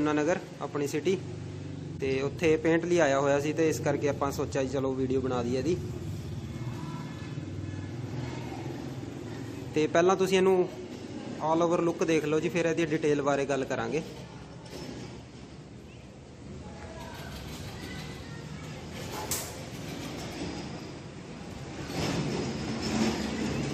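At 1.98 to 2.00 s, a corrupt frame was decoded: bits inside a short run of compressed frames were flipped, and the decoder played them anyway, rebuilding the sound from misread codes and wrong gains. Energy lands at frequencies where it does not belong for the length of the damaged data, producing a brief, faint chirp-like blip. Its peak sits at roughly -40 dBFS.

At 4.10 s and again at 20.26 to 20.33 s, compressed frames were skipped: data was missing or rejected as damaged, so the decoder never played it, and each time the audio jumps ahead by about 20 ms. Each join comes through with a slight forward lurch.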